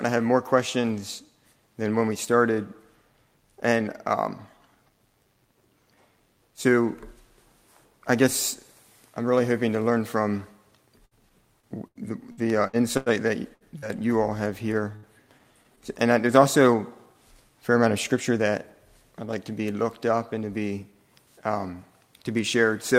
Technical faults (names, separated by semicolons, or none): repeated packet loss (robotic sound); burst of packet loss; short concealed packet loss; jitter buffer speed-up